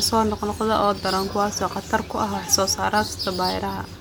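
Nothing goes wrong anywhere in this bit of speech, so there's simply no fault to point to.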